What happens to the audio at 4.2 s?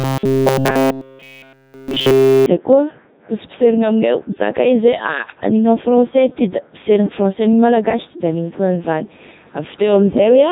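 At 4.2 s the speech is still passing through the Codec 2 vocoder, as it does for the whole clip. Rather than keeping the waveform, the decoder rebuilds the voice from sine waves using only pitch, voicing, energy and a coarse spectral envelope, at a rate that points to 3.2 kbit/s. The result is heavily robotic and buzzy.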